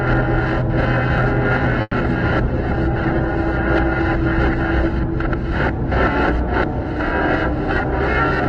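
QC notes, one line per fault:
1.81 to 1.94 s, call audio freeze: the sound stretches into a fading buzz, with about 30 ms of silence, then picks up where it stopped, about 110 ms later. Nothing is lost, unlike a concealed loss. Likely a jitter buffer running empty while packets were held up.
2.14 to 2.17 s, short concealed packet loss: a brief smear as the decoder extends the preceding sound by about 10 ms. About 20 ms of real audio is gone for good. The timing does not shift, unlike the freeze just before it.
2.44 to 7.02 s, call bitrate drop: the encoder falls from 96 to 13 kbps and stays at its lowest for about 2.25 s. The sound turns rough and watery, and its top end narrows from 20 kHz to 12 kHz. That coarse grain separates it from simple low-pass filtering.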